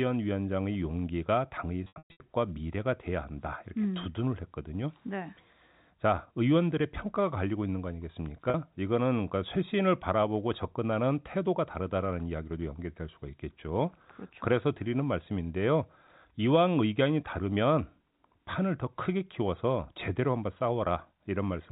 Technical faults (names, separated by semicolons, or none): packet loss with pitch repetition